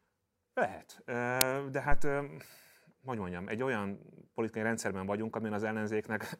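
This speech clip has an uninitialised buffer at 1.41 s: a block of about 5 ms played before audio was written, so leftover memory came out as a sharp crack. A phantom power thump follows from 1.92 to 2.14 s, when a supply step on the live input passed through the coupling capacitors as a deep thump decaying over roughly 51 ms.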